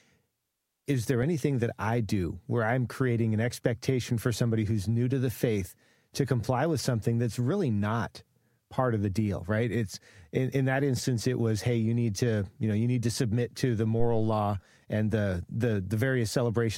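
A speech clip with a phantom power thump from 14.00 to 14.42 s, between "to submit to the" and "and the": a deep low-frequency bump peaking at about -19 dBFS and decaying in roughly 94 ms. A supply switching on or off on a live input sent a voltage step through the coupling capacitors.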